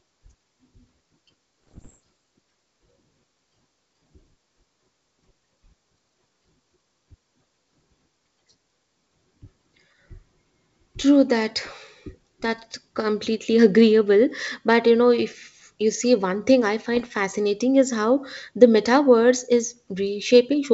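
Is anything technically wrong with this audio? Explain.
Yes. There are bit errors on an ADPCM link, from 1.67 to 2.01 s and again from 16.95 to 17.10 s, just after "see one thing I". Flipped bits, somewhat under 1 percent, corrupt the adaptive step size and predictor, so each hit keeps ringing for milliseconds as pops and gritty bursts with brief level jumps. Unlike packet loss, nothing goes silent or repeats. The G.722 coding underneath sounds clean, which points to its full 64 kbit/s mode.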